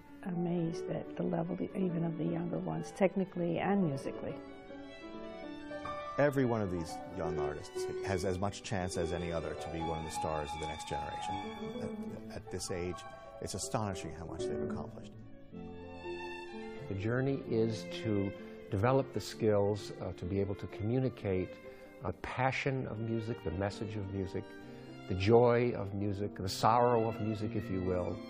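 At 11.23 s and again at 22.07 s the decoder skipped compressed frames, either because they were missing from the file or because it rejected them as damaged. The sound jumps forward at each point: by roughly 20 ms the first time, which fits a single frame of about 23 ms, and by roughly 100 ms the second time, which points to around four frames. The longer second skip removes more material at its join.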